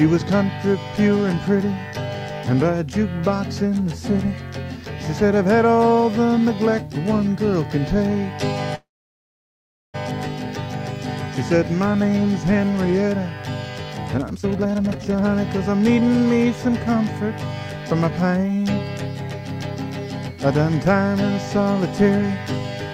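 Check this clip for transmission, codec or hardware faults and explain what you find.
Two kinds of transmission fault are present: one call audio freeze and two bursts of jitter buffer speed-up.

From 8.75 to 9.96 s there is a call audio freeze. The sound briefly trails off, then goes silent for about 1.1 s. Delayed packets likely emptied the jitter buffer. Playback then resumes where it stopped, with nothing lost.

From 14.14 to 15.38 s, jitter buffer speed-up runs the sound at 188% speed, trimming roughly a second. From 15.79 to 16.46 s, a milder 113% pass removes about a tenth of a second. Both sound rushed, but pitch is unchanged.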